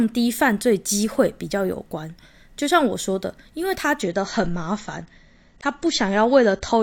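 Speech recording with an adaptive stream at a lower bitrate from 4.02 s to the end of the clip. At that point the sound switches abruptly, with no gap, to a thinner version with nothing above 8.4 kHz and more audible coding artefacts. The player has fallen back to a lower-quality rendition of the same AAC stream, most consistent with a drop from roughly 96 kbit/s to around 32 kbit/s after the connection slowed.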